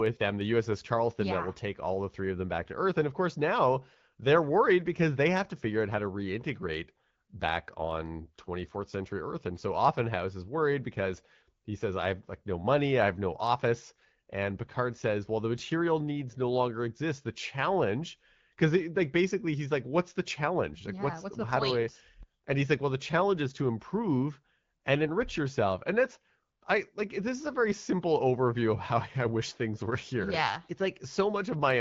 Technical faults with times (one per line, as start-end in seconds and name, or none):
none